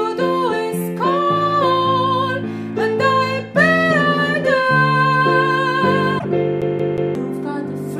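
At 6.15 s there's a quick glitch lasting about a tenth of a second, through to 6.25 s. That's damaged data in a compressed stream: a stretch of the encoded bytes came through wrong, so the decoder couldn't make sense of those frames, lost its footing and went hunting for the next valid frame header. What you hear is that brief garbled blip as it scrambles to resync, with the audio picking up again right after.

Then from 6.61 s to 7.15 s you get the classic CD stuck on one turn. A chunk of about 0.18 s plays three times in a row, each pass separated by a tiny mute. That's a scratch kicking the laser back one track at the same point on every rotation, so the same slice keeps coming round. The result is that fast, perfectly even stutter of a skipping disc before playback moves on.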